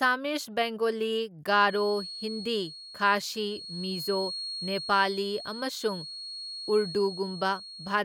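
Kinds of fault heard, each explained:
Feedback whistle: from 1.61 s to the end, a thin, steady whistle at 4.3 kHz sits under the speech, roughly 10 dB below it and swelling and fading slowly in level. The likely cause is a loudspeaker-to-microphone loop held just at the edge of feedback. At that point the loop gain at one frequency is close to unity, so the tone keeps circulating and sustaining itself without building into a runaway howl, leaving a persistent pitched ring behind the talker.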